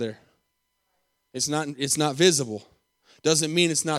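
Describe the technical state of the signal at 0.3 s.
At 0.3 s the speech signal is intact, with no audible technical fault at that moment.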